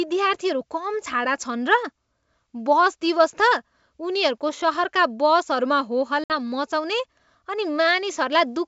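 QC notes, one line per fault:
6.24–6.32 s, packet loss on an ADPCM call: about 60 ms of the G.722 stream, several packets' worth, drops to a hard-edged silent gap, a flat-line hole on the waveform and a blank vertical band on the spectrogram. The decoder's predictor and step size then lag the sender's, so the speech resumes slightly distorted and settles within tens of milliseconds.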